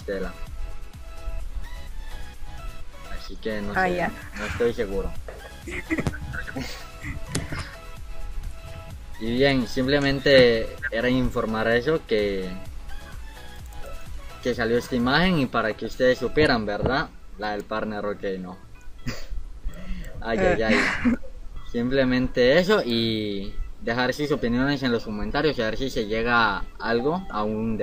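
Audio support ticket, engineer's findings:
No audible faults found on listening; nothing to attribute to any component, no action required.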